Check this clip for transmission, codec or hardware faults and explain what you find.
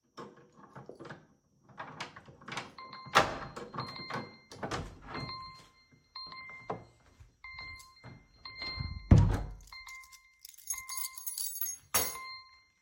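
Nothing here points to a transmission, codec or hardware problem; the sounds come across steadily, with no dropouts, glitches or jumps.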